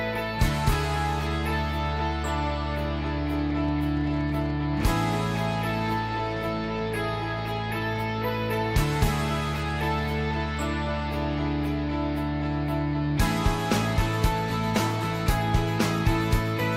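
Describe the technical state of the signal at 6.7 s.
At 6.7 s the signal sits inside a train of clicks running from 3.39 to 8.2 s. Around fifty similar pulses arrive at an uneven pace, about 10.6 per second, peaking near signal level. They are heard as popping ticks, likely from interference or a faulty connection.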